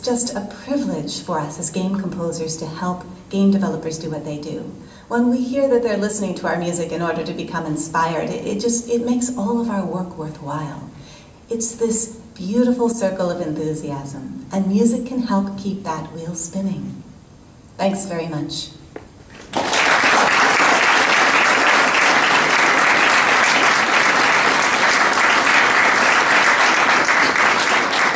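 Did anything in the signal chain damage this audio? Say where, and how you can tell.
No, nothing in the signal chain has audibly damaged this audio. There is no point where any stage of capture, conversion, transmission, storage or playback can be heard altering the sound.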